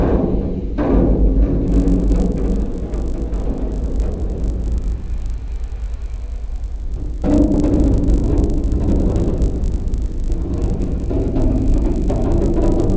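From 1.68 s to the end, there's a resampler restarted on every block. The 48 kHz to 16 kHz conversion treats each 20 ms block in isolation, so every edge gets a small error, heard as a 50 Hz buzz riding on the sound whenever something's playing.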